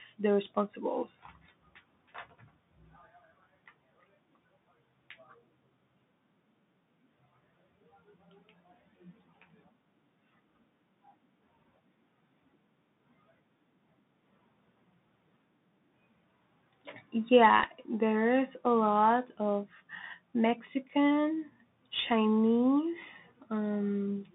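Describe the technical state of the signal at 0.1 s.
At 0.1 s the speech is already passing through the Bluetooth CVSD headset codec, which persists for the whole clip. Each sample is coded as a single up-or-down step of adaptive size, the band runs only 150 Hz to 3.7 kHz, sibilants turn scratchy, and a grainy hiss sits beneath the speech.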